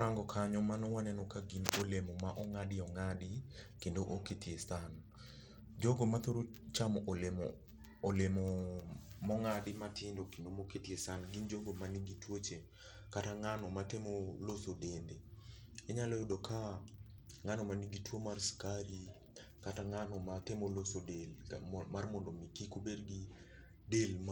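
Bluetooth SBC compression runs through the whole of this speech clip, from start to finish. The top end thins out and flickers in and out, and a gritty, grainy noise with aliased tones rides on the speech. That points to a likely SBC link at a low bit pool, which fits a stream around 96 kbps. The codec splits the signal into sub-bands and shares out too few bits, starving the upper bands and quantising the rest coarsely.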